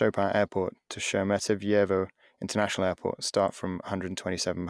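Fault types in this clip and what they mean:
No technical faults are audible in this speech.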